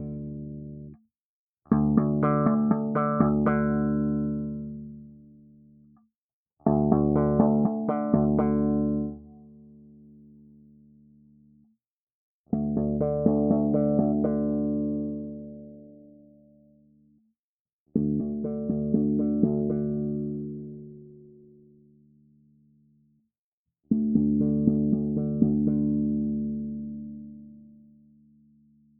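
Throughout, the level pumps and flutters, with held sounds and decaying tails sinking while attacks punch through, swinging by something like 20 dB. This is a noise suppressor applied to music or sounds: a speech-oriented suppressor mistakes sustained tones and ambience for noise and keeps pulling them down.

At 0.22–1.09 s, 4.61–6.11 s, 9.09–11.77 s, 15.33–17.34 s and 26.97–28.99 s, the sound dips sharply and its sustain or tail collapses, falling by about 18 to 19 dB at the deepest. Each is sound cut by the noise suppressor, which judged these steady or fading passages to be noise and attenuated them heavily.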